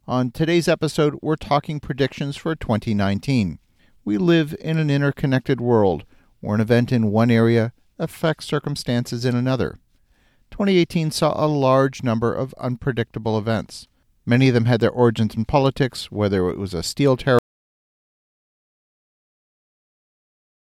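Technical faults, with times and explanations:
17.39 s to the end, audio dropout to silence: just after "it was a steel" the speech cuts off mid-flow and the last 3.4 s are silent, likely from lost input while recording continued. No room tone survives, unlike a natural pause or fade-out.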